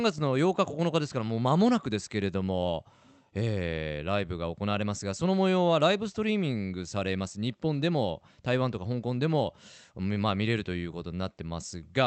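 No faults are audible in the speech, which carries the band-limited character of a call path, with the top end stopping at about 8 kHz as the codec's bandwidth setting would give.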